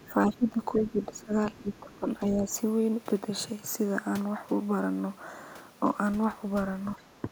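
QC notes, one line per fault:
0.00–0.65 s and 1.53–1.94 s, other side's voice leaking through: a faint second voice, roughly 25 dB under the talker, likely loudspeaker echo the canceller left in.
0.06–2.54 s and 6.97–7.31 s, speech suppressed in double talk: the talker dips by up to around 15 dB, likely the echo canceller turning both sides down during overlap.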